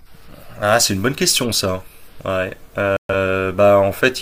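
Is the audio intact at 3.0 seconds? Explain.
No. At 3.0 seconds the speech sits inside a digital broadcast dropout running from 2.97 to 3.15 s. The receiver stopped getting clean frames, either losing the signal or failing their checksums. It muted the output until valid frames returned. The sound drops to silence, then the speech resumes. About 0.13 s of programme is missing, which fits a few lost frames. That audio cannot be recovered from this copy.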